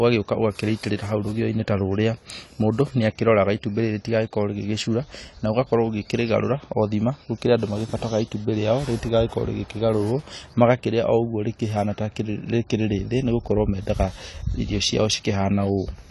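AAC compression, consistent with a 32 kbps AAC-LC encode, is the likely cause: the speech has nothing above 11.5 kHz throughout and sounds plainly dull and smeared.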